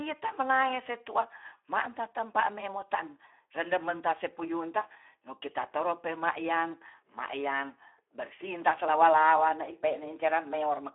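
Throughout, the speech carries plain Speex codec damage. Starved excitation makes it hoarse and noisy, fitting about 11 kbps. Nothing sounds above 3.8 kHz.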